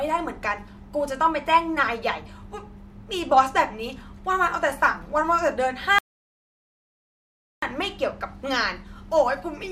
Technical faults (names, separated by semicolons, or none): audio dropout to silence